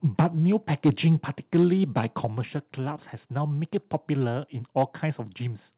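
The microphone input gain was likely set too high, so speech peaks drove the converter past full scale at 0.19 to 0.26 s (about 6 dB over, roughly a tenth of samples flattened). This microphone overload adds a harsh, crackly edge to the loudest syllables. Around 0.21 s the microphone volume stepped down, likely as the call software reacted to the clipping, dropping voice and background together by about 2 dB in one abrupt step. Overload returns at 0.85 to 1.08 s (about 5 dB over), 1.54 to 1.65 s (about 2 dB) and 1.97 to 2.25 s (about 4 dB, only a few peaks flattened). Right after, at 2.25 s, a second, larger step cuts the level by about 6 dB, an audible sudden drop. A final brief overload at 4.77 to 4.83 s, about 2 dB over, crackles. Throughout, nothing is heard above 4 kHz, consistent with a G.711 call path.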